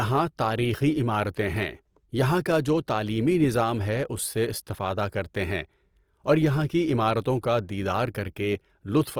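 Throughout, the speech has a rough, grainy texture, plainly audible and likely from Opus compression at a rate that fits about 24 kbps. Unlike MP3, there is little swirl: bands sound noise-filled rather than hollow, and the bandwidth stays full to about 20.4 kHz.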